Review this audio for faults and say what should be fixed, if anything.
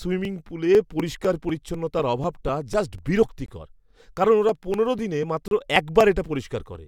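Periodic USB or driver dropouts run from 0.25 s to 6.75 s, one roughly every 0.25 s, about thirty in all. Each skips around 2 ms of speech outright, so the splice clicks only while sound is present. Unlike segment gaps, the speech here is lost, not paused. Preventing this means finding the background task that blocks the USB bus or driver on that fixed cycle, or enlarging the driver buffer so it rides through the stall.

There is a gap between stream segments at 3.46 s lasting 21 ms, and another at 5.48 s lasting about 32 ms. At both points mismatched segment time stamps left holes that the player filled with hard-edged silence. Nothing is missing; the timeline simply stretches, which distinguishes these from dropouts. Fixing it means making each 2 s segment's time stamp continue exactly from the previous segment's end.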